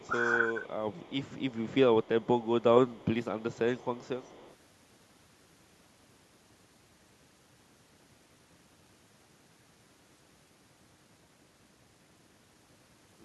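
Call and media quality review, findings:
Echo leak, 0.00–0.36 s, 0.62–0.73 s, 0.90–1.76 s, 2.03–2.27 s, 2.88–3.06 s, 3.22–3.59 s, 3.75–4.56 s. Faint delayed copy of the talker, 199 ms behind, sitting about 30 dB under the direct sound. Likely the far-end loudspeaker echo canceller leaving residual echo, returned to this side. Present only in the first 4.6 s.

Speech suppressed in double talk, 0.07–0.13 s. Short dip of roughly 15 dB in the talker's level, about 70 ms total, overlapping the opening echo stretch. Likely the echo canceller's suppressor misreading local speech plus returning echo as echo and attenuating both.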